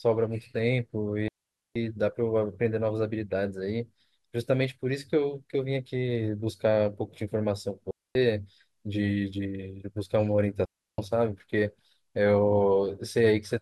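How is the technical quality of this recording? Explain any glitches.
The speech is interrupted by three digital wireless dropouts: 1.28 to 1.76 s, 7.91 to 8.15 s, and 10.65 to 10.98 s. Each time, the receiver loses too much data and mutes the signal behind a very quick fade, leaving a clean hole of near silence. The holes last about 0.48 s, 0.24 s and 0.33 s. Unlike an analogue wireless fade, there is no hiss or noise burst at either edge.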